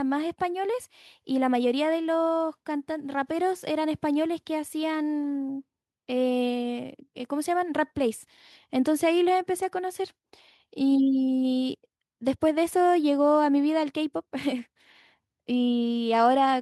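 Nothing in the speech stood out as a technical fault on listening.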